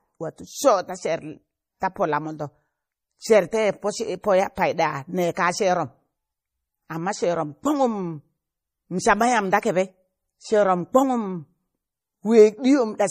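From start to finish the speech has nothing above 15.1 kHz and carries the smeared, watery texture of heavy MP3 coding. The cause is likely low-bitrate audio saved at a high bitrate, which fits a 40 kbit/s encode re-saved around 192 kbit/s. The larger file cannot restore the detail already lost.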